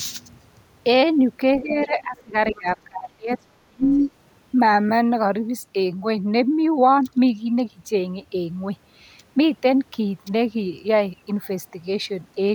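From 1.62 to 2.35 s the talker's speech sinks by around 20 dB, then again from 2.52 to 4.0 s by as much as 35 dB. This is speech suppressed in double talk, likely an echo canceller turning everything down while both sides spoke. Unlike a network dropout, the voice dips rather than stopping cleanly.

From 2.55 to 2.59 s, inside that second dip, a brief scrap of the other side's voice leaking through appears. It is a faint fragment about 30 dB under the talker, likely loudspeaker echo left in the microphone. It is a separate voice, not a reverberant tail of the talker's own speech.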